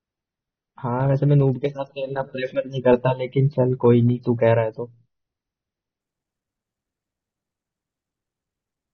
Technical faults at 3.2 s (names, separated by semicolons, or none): adaptive stream starting at a low bitrate